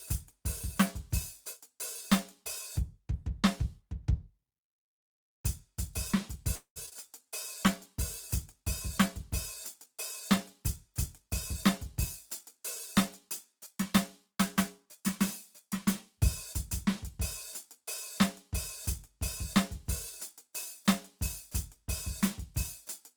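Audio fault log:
6.55–6.78 s call audio freeze. The music stops moving forward for about 220 ms. The last sound is carried on and then fades, ending in roughly 100 ms of silence. Nothing is lost from the music. It resumes exactly where it stopped, so the pause is inserted rather than cut out. The likely cause is held-up packets emptying the jitter buffer. The wait adds about 204 ms of delay to the stream from here on.
6.86–6.97 s repeated packet loss (robotic sound). Three holes open in quick succession within about 110 ms. The longest lasts 24 ms. Each is patched by stretching the sound just before it. About 45 percent of this short span is synthetic fill, roughly 49 ms in all. Another 60 ms of the music is simply gone. The rapid patch-and-drop cycle gives a choppy sound with pieces missing to the passage.
7.19–14.68 s call bitrate drop. The bandwidth estimate falls and the encoder's rate is cut from 32 kbps to 18 kbps. 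It stays at the lowest rate for about 6 s. With fewer bits, Opus codes the music more coarsely. The texture turns rough and watery, and fine detail smears. Quality holds at this lower level until the rate recovers near 14.68 s.
11.26–15.66 s jitter buffer speed-up. The buffer is holding more audio than its target. The receiver trims it by removing many tiny pitch-period slices, about a tenth of a second in total. Playback runs at roughly 102 percent speed with no change in pitch. The music's tempo no longer holds steady through this stretch.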